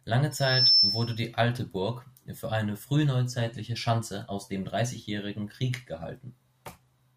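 Right at the start, from about 0.31 s to 1.22 s, there's a loudspeaker feedback squeal sitting on the speech. The mic is hearing the speaker it feeds, and around 5.3 kHz the loop gain tipped past one, so that single tone fed on itself. You can hear it swell up over roughly 0.4 s into a piercing whistle, ending up something like 10 dB louder than the speech before it cuts off.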